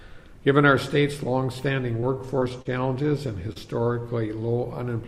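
Repeated packet loss (robotic sound) runs from 1.97 to 2.67 s. Over this stretch the stream dropped data seven times, each gap no longer than 28 ms. The receiver patched every hole by stretching the last sound forward, about 105 ms of invented fill in all, standing in for some 60 ms that never arrived. With 15% of the span synthetic and the holes close together, the sound turns choppy, with fragments missing.

Short concealed packet loss follows at 3.53 to 3.58 s. Roughly 20 ms of audio failed to reach the decoder in time, and the receiver bridged it with about 27 ms of sound extrapolated from what came just before, then blended back into the real signal. This single isolated patch is heard as a brief smear or wobble, and a very short sound falling in that window can disappear.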